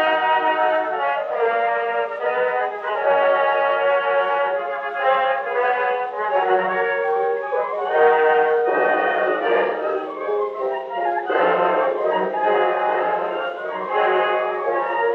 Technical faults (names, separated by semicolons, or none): doubled audio track